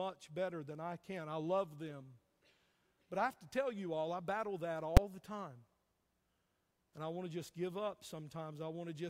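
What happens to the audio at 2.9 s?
Nothing goes wrong at 2.9 s; the speech runs through that moment intact, with no dropout, click, distortion or other fault to be heard.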